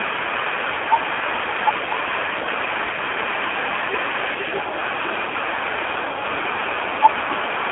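Throughout, the AMR narrowband mobile codec leaves speech buzzy and synthetic, with nothing above 3.8 kHz. Unlike simple band-limiting, low-bitrate vocal-tract modelling, fitting about 7.4 kbps, causes this buzz.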